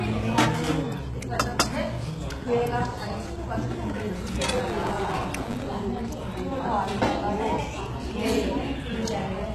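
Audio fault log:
throughout, HE-AAC compression: The whole clip has plainly audible codec damage, with the treble sounding synthetic and gritty and nothing at all above about 12.3 kHz. This is likely HE-AAC at a very low rate, around 16 kbps. The lower spectrum is coded directly, and the upper bands are rebuilt by copying lower content upward under a coarse envelope. The result is brightness that doesn't truly match the source, with harmonics failing to line up across the join.
4.52 to 5.75 s, buffer tearing: A robotic, rattling buzz at 100 Hz sits on the sound for just over a second. The writer and the reader of the playback ring buffer have drifted into each other's path, so every 10 ms period carries a small slice, roughly a tenth, of audio from about 20 ms earlier. The hard splices at both edges of that stale slice repeat at the buffer rate and produce the steady buzz.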